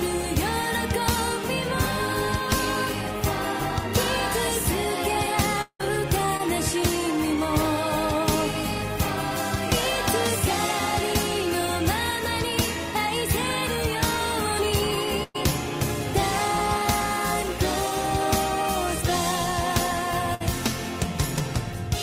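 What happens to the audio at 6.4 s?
From 6.37 to 6.41 s there is a short concealed packet loss. About 20 ms of audio never arrived, so the receiver extended the preceding sound to cover the gap and then blended back. The result is a brief smear or wobble rather than silence or a hard click.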